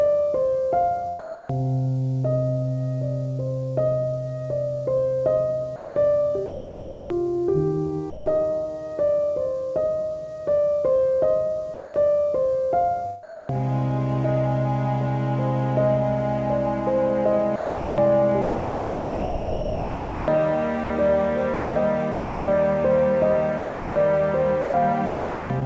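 At 1.19 s the sound drops out for 300 ms, until 1.49 s, losing about 240 ms of real material. A steady, featureless hiss replaces it. This is sound dropped by the voice detector: the sender likely judged the passage to be background and stopped transmitting, and the receiver generated comfort noise. On a spectrogram the detailed energy gives way to a flat, even noise band. The waveform shrinks to a low, uniform envelope before the sound resumes.

From 5.76 to 8.26 s the sound is chopped by the voice detector, which likely switched transmission off and on several times. About 1 s in total becomes comfort noise. The same choppiness returns from 11.74 to 13.52 s, with about 460 ms replaced, and from 17.56 to 25.64 s, with about 3.9 s replaced. A spectrogram shows alternating blocks of structured content and smooth noise with hard vertical edges, all cut off at 8 kHz, which fits the G.722 call path. 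The waveform shows abrupt steps between full-level sound and flat noise.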